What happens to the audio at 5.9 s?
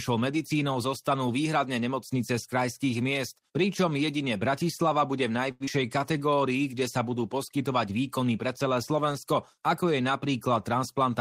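The speech briefly drags, slowing to about 90% speed with pitch unchanged, from 5.86 to 6.35 s, between "bude v" and "kde sa budú poskytovať". This is a jitter buffer slow-down: the receiver repeated short pitch periods to rebuild its reserve, adding 58 ms.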